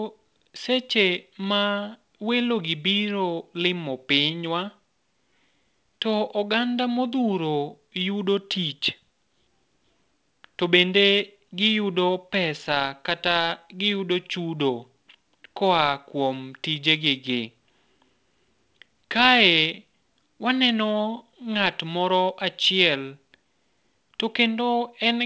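No technical faults can be heard anywhere in the speech. It comes through a working WebRTC call path, and with nothing above 8 kHz the band limit fits a wideband codec such as G.722.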